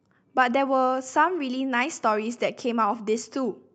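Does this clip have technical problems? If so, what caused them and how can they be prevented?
No, nothing stood out as a technical problem on listening to this speech clip, which comes through a normal Opus call path.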